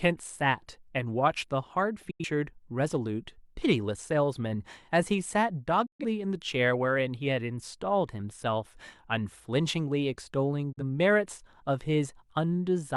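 Speech briefly fades out over about 8 ms into silent holes at 2.10–2.24 s, 5.86–6.05 s and 10.72–10.83 s, then resumes further on. This is digital broadcast dropout: the receiver muted after losing about 85, 128 and 43 ms of audio, consistent with dropping two, three and one frames.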